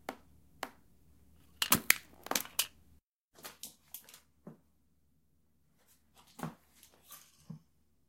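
A corrupt frame decoded at 1.43 s: damaged bits in the compressed stream were played through, so misread gains and codes put energy at wrong frequencies. In this everyday-sound recording it comes through as a brief, very faint glitch, about -55 dBFS, spanning what sounds like a couple of frames.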